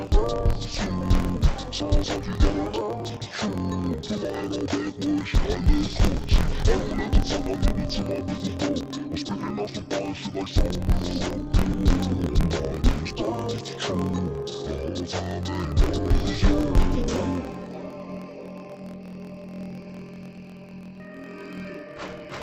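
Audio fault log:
Throughout, interleaved audio read as planar: the player treats each 24 ms block of alternating left-right samples as if the first half were all left and the second half all right. Each channel then gets its samples stretched across the full block, so everything drops an octave (12 semitones) while the overall pace holds. Because the halves are stitched back together every block, you get a dull, doubled, choppy sound with a buzz at about 41.7 Hz, the block rate.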